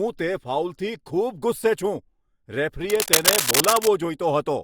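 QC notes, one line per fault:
2.90–3.88 s, cable scratch noise: for about a second, dense, uneven bursts of crackle and rustle sit over the speech at roughly the same loudness. This is likely a worn cable or connector being moved, its contact resistance changing rapidly and breaking up the signal.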